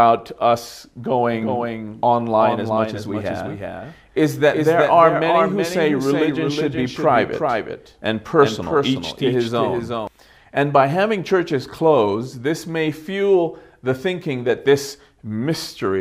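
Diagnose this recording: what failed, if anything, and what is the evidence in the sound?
There's a doubled audio track from 1.33 to 10.07 s: a full-band second copy trails the original by around 0.4 s, a few dB quieter, with no decay or room colour, and it cuts in and out abruptly. Likely a duplicate capture path or a misaligned edit.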